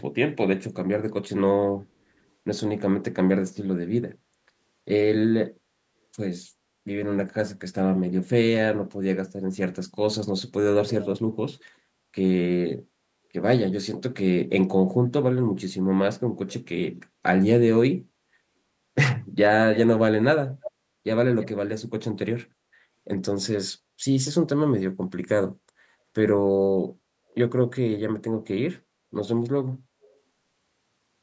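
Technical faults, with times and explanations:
11.59–11.64, 20.61–20.71 and 21.40–21.48 s, echo leak: a call echo canceller likely let loudspeaker pickup through, returning short copies about a third of a second late: faint at first, then clearly audible.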